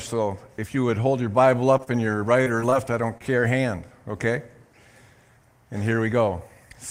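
Repeated packet loss (robotic sound) runs from 1.77 to 2.74 s. Over that stretch the stream keeps losing packets or receiving them too late, and each hole is covered by extending the sound that came just before it. Seven short gaps follow one another, the longest about 31 ms. Roughly 122 ms of patched sound replaces real signal, around 13% of the span, and about 80 ms is lost outright. The result is a choppy texture with small pieces of the audio dropped.

A short stall from a late packet occurs at 3.18 to 3.24 s. One packet arrived late, the jitter buffer ran dry, and the receiver held the last sound for about 26 ms while it waited. Once the packet arrived, playback resumed from the same point, so nothing is lost. The delay shift of about 26 ms stretches the timeline by about 11 ms, and it is heard as a brief held sound with a faint buzz or dip.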